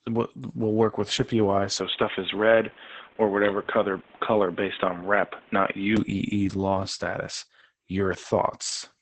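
A speech recording carrying Opus voice compression throughout, running in SILK mode at a low rate of about 10 kbps. The linear-prediction coder keeps only a wideband signal, with nothing above 8.9 kHz, and codes the excitation coarsely at this rate, so the damage is heavy: the speech sounds muffled and hoarse with a slightly robotic edge. From 1.80 s to 5.97 s the band narrows further, to nothing above 3.8 kHz, and the tone turns dull and boxy, with a new noise floor around 30 dB under the speech. The change happens with no gap and little or no shift in level. At 5.97 s the wider band returns just as abruptly. This points to an input switched to a poorer device in mid-recording, likely a second microphone or a headset's call profile that passes a narrower band and has its own background noise.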